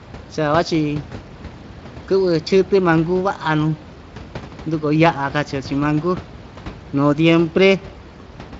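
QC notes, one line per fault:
No faults heard in this clip.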